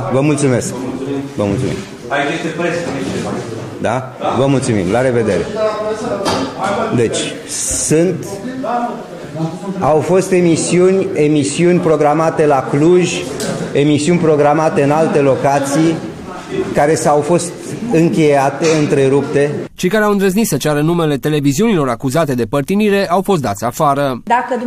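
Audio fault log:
No faults detected in this clip.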